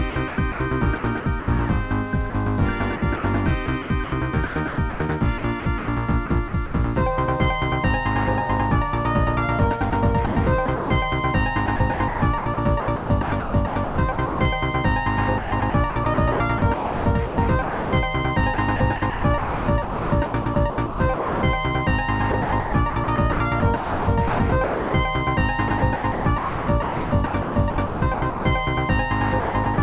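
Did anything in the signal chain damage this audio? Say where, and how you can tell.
Yes. The sound turns choppy, with passages replaced by a synthetic hiss, at 0.1–1.48, 2.3–6.74, 9.9–14.4, 15.38–21.42, 22.32–28.44 and 29.4–29.78 s. The likely cause is sound chopped by the voice detector in call processing: the sender repeatedly stopped transmitting, and comfort noise filled the gaps.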